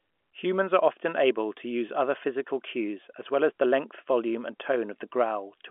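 The speech sits in a telephone band of about 250 Hz to 3.4 kHz, with nothing above 3.7 kHz, as G.711 A-law line coding leaves it, and no technical faults can be heard.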